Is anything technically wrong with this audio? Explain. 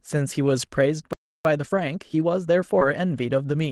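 Yes, there are a few problems stacked together here.

At 1.13 s the speech cuts to silence for about a third of a second, until 1.45 s. That's a playback stall, likely the player running dry or getting blocked.

From 1.45 s to 3.56 s you get time-compressed catch-up: the player trims small pieces and cross-fades them to clear the backlog, so speech runs about 1.15 times fast at normal pitch.

There are two lost packets rebuilt from error correction, at 1.77–1.79 s and 2.81–2.83 s. Each 20 ms stretch came from the low-bitrate backup copy carried in the next packet, so it sounds rougher and noisier, without a gap.

Around 2.79–2.83 s there's also a short concealed packet loss. About 20 ms arrived too late, and the receiver extended the preceding sound to fill roughly 13 ms of it before blending back, which leaves a brief smear.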